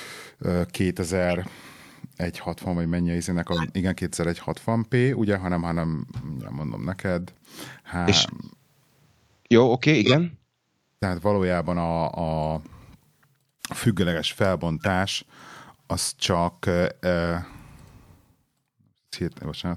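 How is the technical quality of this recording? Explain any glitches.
The recording is marred by six short decoding glitches. Corrupt frame decoded at 1.29–1.36 s, 3.52–3.67 s (after "vagy mennyi az"), 6.41–6.47 s (after "p ugye hanem hanem"), 8.27–8.31 s, 9.98–10.14 s (after "oké okay") and 14.80–14.87 s: damaged compressed frames were decoded anyway, so misread data scattered energy into wrong frequencies. Each is a brief chirp or noise burst lasting one to three frames, loudest near 10.0 s at about −5 dBFS.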